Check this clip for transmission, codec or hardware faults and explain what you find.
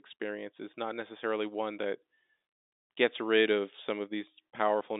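Nothing faulty found: the speech sits in a normal G.711 mu-law telephone band of 250 Hz to 3.7 kHz, consistent with a 64 kbps line, with at most the faint level-tracking quantisation hiss that coding brings.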